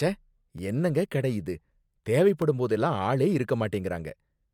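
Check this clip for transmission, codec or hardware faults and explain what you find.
Two dropouts interrupt this speech clip, both the same fault: a block of digital silence. At 0.58 s, just before "என்னங்க கடை இது", likely because the output buffer wasn't filled in time, about 5.3 ms of audio went silent, a length that fits a 256-sample block. At 2.42 s a 1.3 ms gap, consistent with a 64-sample block, does the same. The signal cuts to silence and returns with no fade, so each is heard as a tick or dip rather than an audible hole.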